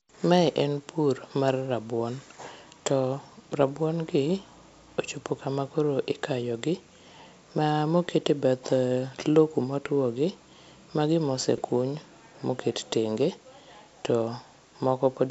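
At 11.58 to 11.62 s, bit errors on the ADPCM link, at roughly one bit in a thousand, knock the decoder's step size and predictor off track, so the damage rings on past each flip. This produces a brief rough burst with pops and a momentary change in level against the clean G.722 wideband sound.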